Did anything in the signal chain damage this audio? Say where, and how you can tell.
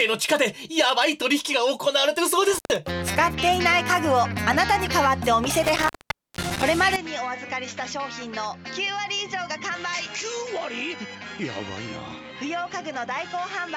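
Yes, there are two separate problems. The first is an intermittent contact in the analogue wiring. At 2.53 s there's a dropout of about 113 ms, and from 5.64 to 6.63 s a longer one of nearly half a second. Both have crackle at the edges and faint hiss in the gap. That's a loose plug or cable briefly breaking the circuit, so the signal vanishes and you're left hearing only the open line's noise.

The second starts at 6.96 s and runs to the end. The sound abruptly goes dull and boxy, with nothing above 7.6 kHz. It also drops roughly 10 dB in level, and a new noise floor appears about 30 dB under the signal. There's no gap at the changeover. This is likely an input switched to a poorer device at the driver or system level, with a narrower-band mic or headset profile taking over mid-recording.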